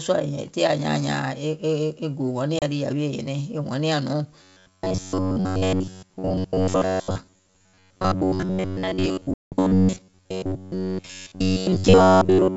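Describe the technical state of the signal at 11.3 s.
At 11.3 s, robotic sound from repeated short buffers persists from 4.43 s to the end: audio likely arrives too seldom, so roughly 11 ms chunks loop over most of the real signal, forcing a rigid, metallic 94 Hz buzz. The G.722 wideband coding beneath remains clean.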